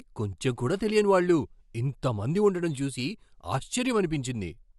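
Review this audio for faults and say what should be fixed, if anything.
No faults; nothing needs fixing.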